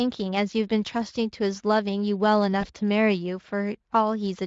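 VoIP packet loss concealed by the speech codec at 2.61 s: a 20 ms gap, likely one lost frame, is extrapolated into a fading buzzy tone or noise lasting to 2.66 s.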